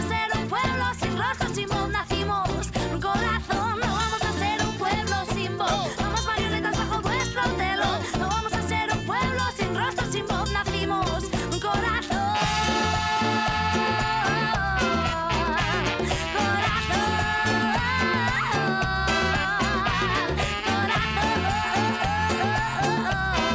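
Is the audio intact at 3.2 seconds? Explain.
Yes, the audio is intact at 3.2 seconds, with no dropout, click, distortion or other fault at that point.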